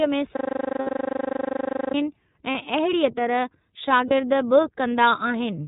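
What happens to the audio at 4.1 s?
A lost iLBC frame hits at 4.08 to 4.12 s, a gap of about 30 ms that matches one missing 30 ms frame. The decoder fills it by repeating the last pitch cycle blended with noise, so the moment sounds like a brief held, faintly buzzy vowel. Because each frame is decoded independently, the sound recovers right after. Around it, the iLBC codec's plainly audible coding damage runs through the clip: nothing above 4 kHz, and a slightly rough, synthetic texture consistent with the 30 ms-frame mode.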